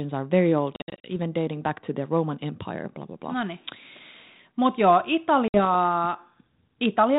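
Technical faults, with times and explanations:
0.76–1.08 s, packet loss on an ADPCM call: Just after "are very old", gaps of silence break up the sound. About 180 ms is lost across roughly 280 ms, the longest gap 60 ms, which suggests around ten short packets. The holes have hard edges. The decoder's predictor and step size drift from the sender's, so each restart comes back slightly distorted. The G.726 coding fits 32 kbit/s.
5.48–5.60 s, packet loss on an ADPCM call: About 60 ms of silence is lost, likely three packets. The same slight distortion follows. It settles within tens of milliseconds.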